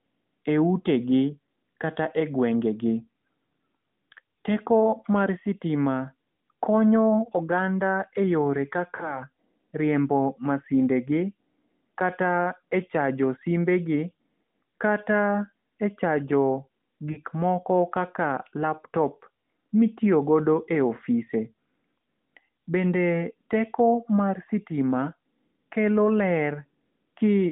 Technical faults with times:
8.96-9.20 lost AMR speech frames
17.12-17.18 lost AMR speech frames

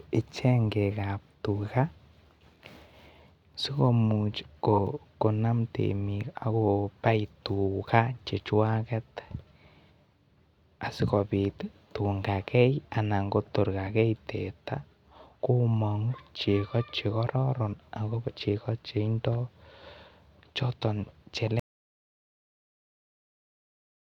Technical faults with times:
21.59-24.07 audio dropout to silence

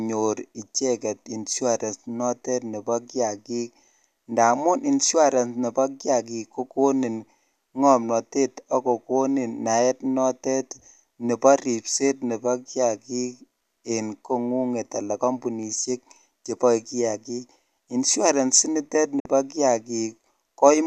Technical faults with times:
19.19-19.26 digital broadcast dropout

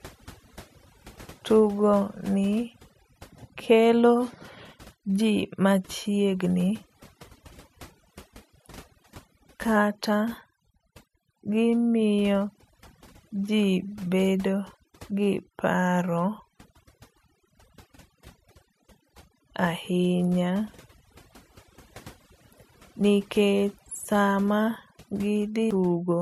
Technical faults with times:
0.00-26.21 overdone noise removal
25.71 damaged data in a compressed stream

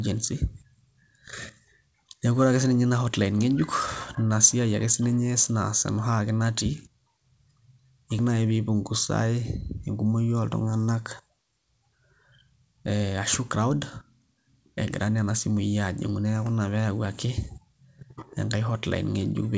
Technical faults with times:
none

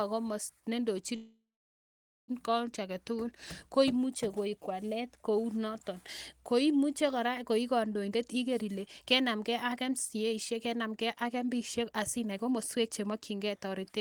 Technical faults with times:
1.15-2.31 call audio freeze
8.02-14.01 jitter buffer speed-up

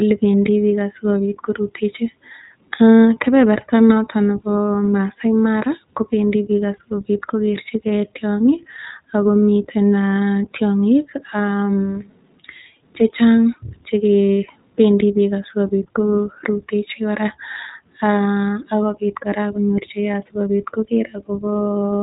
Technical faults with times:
0.00-22.02 iLBC codec

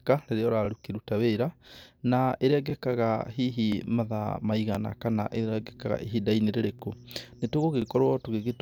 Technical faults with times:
0.65-0.68 overlapping chunks
1.68-1.70 overlapping chunks
2.70-2.72 overlapping chunks
3.72-3.75 overlapping chunks
4.75-4.77 overlapping chunks
5.77-5.79 overlapping chunks
6.79-6.82 overlapping chunks
7.82-7.84 overlapping chunks

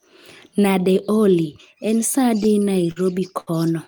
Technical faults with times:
2.43-2.98 repeated stalls (stutter)
3.40-3.49 short stall from a late packet

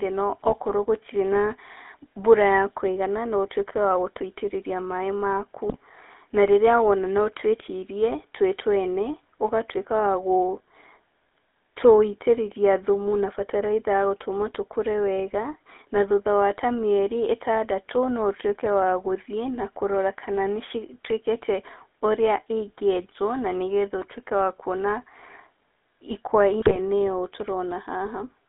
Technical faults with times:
0.00-28.49 GSM full-rate codec
0.44-0.54 GSM bit errors
5.69-5.77 GSM bit errors
26.60-26.79 GSM bit errors

